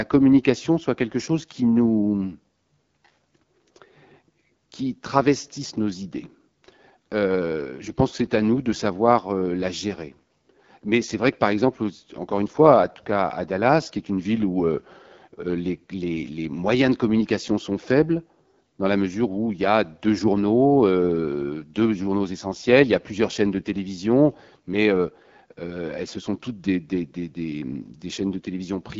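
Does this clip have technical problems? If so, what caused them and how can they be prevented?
Yes. Throughout, the speech sounds rough and raspy, with nothing above 7.5 kHz. This is the AMR wideband (HD Voice) codec at a starved rate, which fits 8.85 kbit/s. Its pulse-driven vocal tract model can't capture fine detail at this rate. Running the codec at 12.65 kbit/s or higher prevents this.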